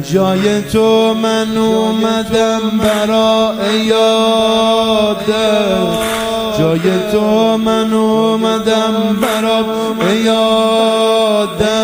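Throughout, a block size mismatch (truncated) discards each block's tail, causing a steady 43.1 Hz buzz that fits 1024-sample blocks. Unlike underrun dropouts, it leaves no gaps, and speed stays normal.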